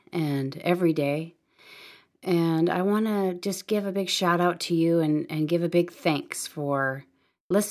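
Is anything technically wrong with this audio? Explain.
No, there's nothing technically wrong with this speech recording that can be heard.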